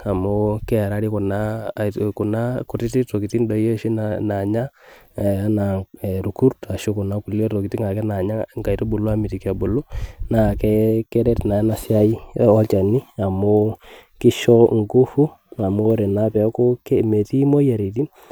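No technical faults can be heard anywhere in this recording.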